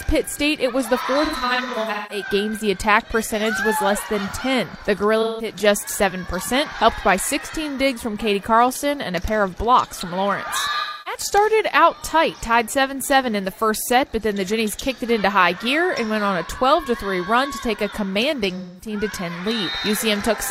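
AAC frame loss with concealment occurs at 1.25–2.25 s, 5.21–5.49 s, 10.80–11.21 s and 18.57–18.93 s. The decoder rebuilt missing frames from the last good spectrum, leaving smeared, noisy, phasey patches. The first is broken into scattered dropouts, with the longest run around 150 ms.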